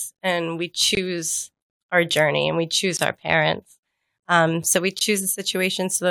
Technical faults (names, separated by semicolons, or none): gap between chunks